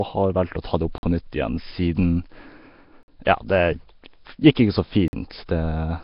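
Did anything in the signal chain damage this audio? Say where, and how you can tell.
Yes. At the codec stage, the whole clip has a rough, hissy, watery texture with nothing above 5.3 kHz, and the damage is heavy. This points to a low-rate stream around 22 kbps, likely Nellymoser compression. Starved bands get no bits and are replaced with noise, so the speech sounds grainy and smeared.

At the storage or playback stage, there is a gap between chunks. Hard-edged 50 ms silences fall at 0.98, 3.03 and 5.08 s, about every 2 s. This fits audio delivered in 2-second chunks with dead time inserted at each join. Nothing is missing, but the flow breaks at every boundary.

Pre-echo, again from the codec, appears at 3.25 s. A hiss of about 19 ms runs just ahead of a sharp onset, which then sounds blunted. The transform spread noise sized for the loud attack across its whole block, so it leaked into the quiet lead-in.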